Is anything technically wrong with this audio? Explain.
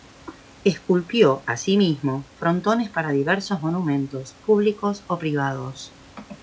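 No, nothing stood out as technically wrong on listening.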